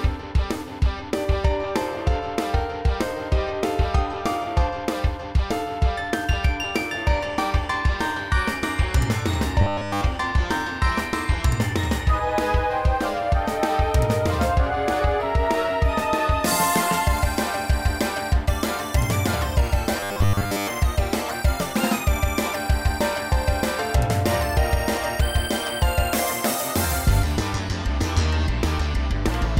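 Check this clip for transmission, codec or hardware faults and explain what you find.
Two stretches of robotic sound from repeated short buffers, at 9.61 to 10.04 s and 20.00 to 20.67 s. The sound turns into a rigid, metallic buzz fixed at 100 Hz, which points to a repeated segment of about 10 ms. This is likely caused by audio arriving too seldom, so playback loops the last fragment while the real material is skipped. The first stretch is entirely buzz, and the second is mostly buzz.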